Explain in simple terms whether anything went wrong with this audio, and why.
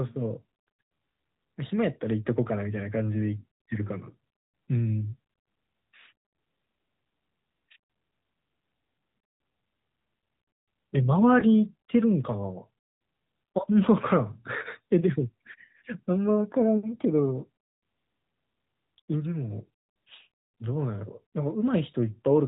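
Throughout the recording, the speech sounds boxed-in and buzzy, with a synthetic edge. All the crisp high end is missing. This is the AMR narrowband mobile codec, the speech compression used on older 2G and 3G phone calls. It throws away everything above 4 kHz and rebuilds the voice from a simple model of the throat and mouth. At this setting, that rebuilding is plainly audible as a thin, artificial quality.

Between about 11.40 and 11.45 seconds there is a brief dip, a tiny wobble in the sound. This comes from lost AMR speech frames. A short piece of the call failed to arrive intact, so the decoder filled the gap by repeating its last good sound at lower volume. The dip is so short that it points to just one missing 20 ms chunk.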